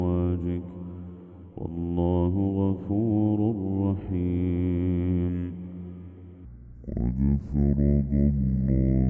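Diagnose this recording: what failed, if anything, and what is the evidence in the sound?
The failure is a wrong sample rate at the playback stage. From 6.45 s to the end of the clip, the sound drops abruptly in pitch by about seven semitones and slows to roughly two-thirds of its previous speed, with both shifting together and in proportion. That coupling shows the samples were clocked out slower than they were captured, with no resampling in between. A 0.667 ratio fits material recorded at 24 kHz being played at 16 kHz.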